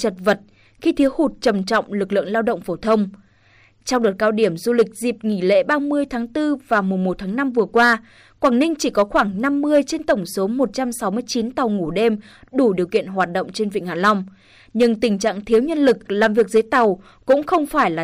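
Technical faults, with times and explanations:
Throughout, hard clipping: the speech is driven about 7 dB past what the stage can pass, so around one percent of samples, the loudest peaks, are sliced flat. That adds harsh crackle on peaks, with an abrupt edge rather than soft saturation's rounded warmth.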